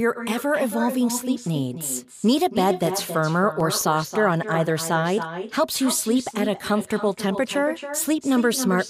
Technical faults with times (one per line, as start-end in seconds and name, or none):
0.00-8.89 echo with no canceller
3.39-4.23 CD scratch ticks